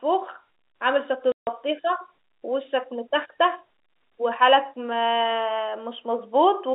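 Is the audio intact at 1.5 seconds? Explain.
No, not cleanly. Packet loss filled with silence cuts a 150 ms hole from 1.32 to 1.47 s, ending just before the moment asked about. The receiver got no data for that stretch and played digital silence instead, a gap that fits five lost 30 ms packets. The sound drops out abruptly and snaps back at 1.47 s.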